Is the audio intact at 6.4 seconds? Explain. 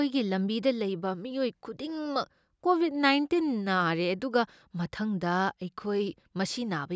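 Yes, at 6.4 seconds the speech is intact, with no fault of any kind at that moment.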